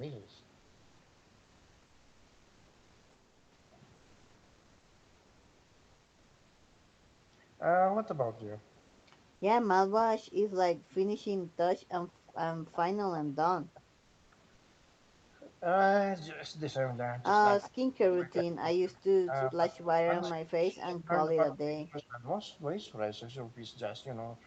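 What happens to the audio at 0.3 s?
The speech sounds slightly hurried while keeping its pitch, running at 108% speed from 0.03 to 0.42 s. This is a jitter buffer speed-up: with excess audio queued, the receiver repeatedly cut out short pitch-period pieces, removing around 40 ms in total.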